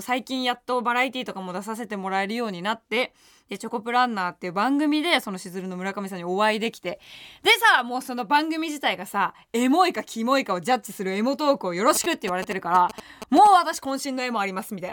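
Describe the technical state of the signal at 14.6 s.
At 14.6 s the speech signal is intact, with no audible fault at that moment.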